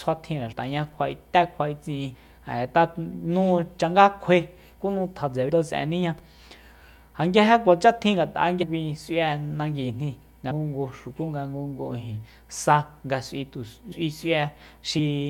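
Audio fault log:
0.51, 2.14, 5.48, 8.62, 10.50 (just after "nanguijni nga"), 13.91, 14.98 s, compressed frames skipped: the speech jumps forward by whole 23.2 ms frames, losing roughly 70 to 150 ms each time. Because adjacent frames overlap, each join is a short smeared blip rather than a hard click, and no silent gap is inserted. That sets it apart from a dropout, which leaves a hole, and from a sample-level splice, which clicks.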